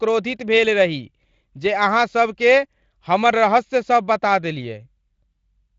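Nothing technically wrong can be heard in this speech recording: it carries the light character of Speex coding at a comfortable rate, with the band topping out near 7.6 kHz, and no faults.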